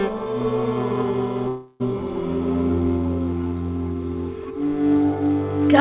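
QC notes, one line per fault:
1.48–1.83 s, long network dropout: the sound smears into a buzzy, fading continuation of itself for about a third of a second, then resumes further on with that stretch missing. The likely cause is lost packets, with the receiver's concealment stretching the last received sound across the gap.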